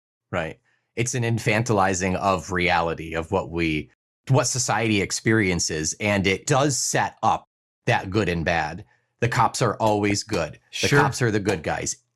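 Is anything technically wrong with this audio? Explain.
Yes. DAB burbling occurs from 0.36 to 0.44 s and from 10.10 to 10.30 s. Weak reception lets bit errors corrupt the MP2 data, so wrong samples put short blips of noise in single sub-bands, causing brief noisy blips.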